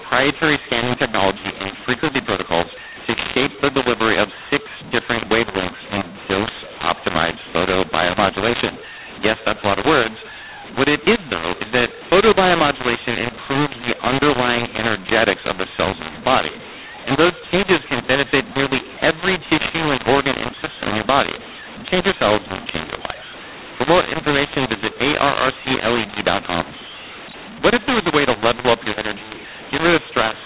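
From start to finish the speech sounds harsh and gritty, with loud and soft passages thrown out of proportion and the pauses filled with a steady hiss instead of quiet, all within the narrow telephone band that stops at 4 kHz. The cause is mu-law and A-law mixed up: the G.711 audio was encoded with A-law but decoded as mu-law, so each 8-bit code maps to the wrong level, scrambling amplitudes and lifting the quietest samples well above silence.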